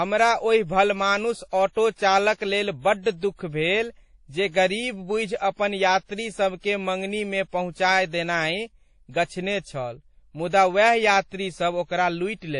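Speech throughout sounds dull and smeared, with nothing above 10.5 kHz and two layers of swirly compression artefacts, likely from transcoding between lossy codecs, consistent with low-rate MP3 re-encoded to WMA.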